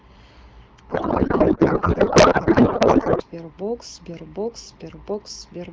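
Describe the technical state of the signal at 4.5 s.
At 4.5 s the speech is intact, with no fault present, as it passes through the AMR wideband (HD Voice) codec at 12.65 kbit/s.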